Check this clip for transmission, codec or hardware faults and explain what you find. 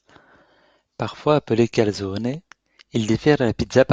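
Nothing wrong turns up in this bit of speech; there's no fault here to report.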